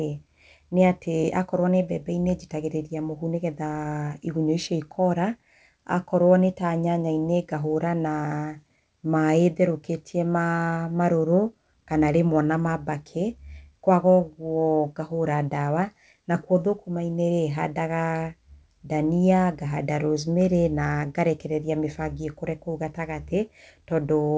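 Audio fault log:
There is no fault.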